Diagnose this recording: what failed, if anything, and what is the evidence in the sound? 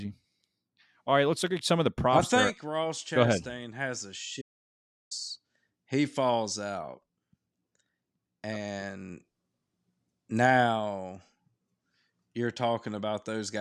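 The input feeding the recorder most likely dropped out briefly, through a loose connection, a lost device link or a momentary mute, while the recording stage kept writing silence. The result is an audio dropout to silence in the speech from 4.42 s to 5.11 s: the voice cuts off abruptly, about 0.69 s of silence follows with no room tone or noise floor at all, and the speech then resumes mid-flow, with that stretch of content lost.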